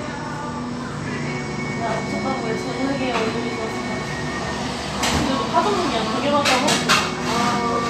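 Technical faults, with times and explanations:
No technical faults can be heard in this recording of sounds. There is nothing here that needs a time or an explanation.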